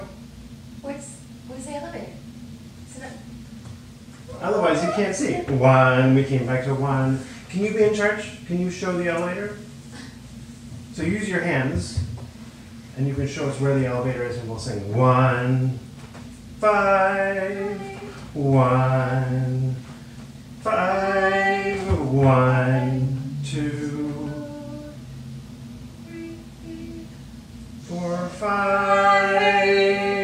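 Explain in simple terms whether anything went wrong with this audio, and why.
Nothing went wrong here; no faults can be heard.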